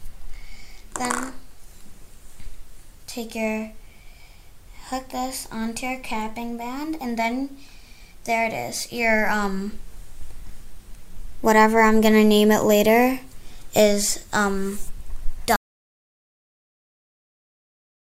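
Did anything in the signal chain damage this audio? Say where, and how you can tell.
Yes. There is an audio dropout to silence starting at 15.56 s and running to the end of the clip. The sound stops abruptly mid-flow and everything after is silence, with no room tone or noise floor left. On a waveform it shows as a flat line; on a spectrogram, a sudden vertical edge into solid black. The stage is likely the input or link ahead of the recorder: the source dropped, but writing continued with zeros.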